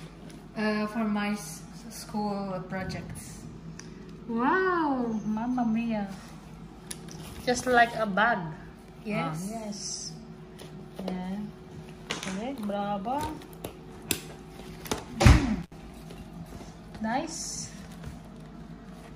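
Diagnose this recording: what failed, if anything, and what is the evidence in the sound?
The failure is in the analogue wiring: an intermittent contact, where a loose cable or plug briefly opens the signal path. Between 15.62 and 15.72 s the sound drops out for about 58 ms, with crackle where the connection breaks and remakes, and faint hiss during the gap. On a waveform this shows as a sudden collapse to near-flat level with jagged spikes at each edge. On a spectrogram it appears as a short dark band framed by thin vertical broadband streaks.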